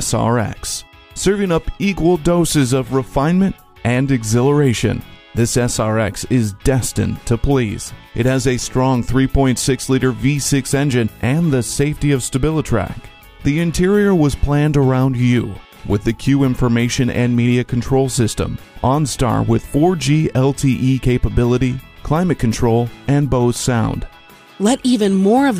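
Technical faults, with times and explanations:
Nothing stood out on listening to this audio.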